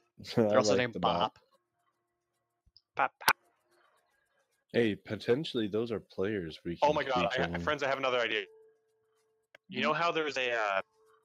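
Right from the start, a noise suppressor built for speech is working on this audio. It treats sustained tones and decays as noise, so the level pumps and thins by around 10 dB. Sound cut by the noise suppressor shows up at 1.31 to 2.78 s (about 22 dB down), 3.71 to 3.99 s (about 10 dB), 8.69 to 9.57 s (about 22 dB) and 10.83 s to the end (about 17 dB). Each time, held sound sinks away while attacks get through.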